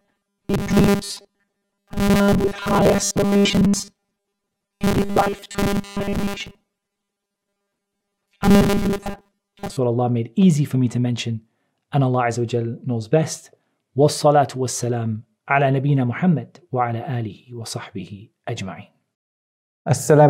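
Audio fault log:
0.01–9.77 s, robotic sound from repeated short buffers: the sound collapses into a stiff, metallic buzz pitched at 200 Hz that only loosely tracks what's underneath. The likely cause is audio arriving too slowly, so playback keeps looping the last chunk of about 5 ms, which gives that 200 Hz drone, while most of the real material, something like two-thirds or more, just gets skipped over.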